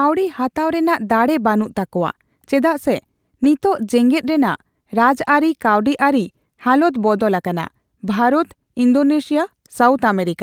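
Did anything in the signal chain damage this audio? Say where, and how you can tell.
Yes, at the network stage: a lost packet rebuilt from error correction at 1.59 to 1.69 s. The speech never drops out, but about 60 ms turns rougher and noisier. That points to roughly three lost packets, each decoded from the low-bitrate copy carried in the following packet.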